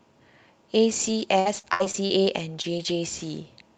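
From 1.07 s to 2.98 s the speech breaks up with repeated packet loss (robotic sound): seven short holes, the longest about 62 ms and about 260 ms missing in total. Each gap is papered over by stretching the last bit of sound, which adds up to around 300 ms of rebuilt audio, about 14% of that stretch. The result is choppy, with bits dropping out. Over the whole clip the sound tops out at about 8 kHz, which fits an Opus call path.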